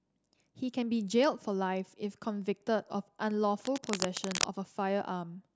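A worn cable or connector being moved likely causes cable scratch noise in this speech recording from 3.62 to 4.45 s, adding loud, uneven scratching just under the speech level.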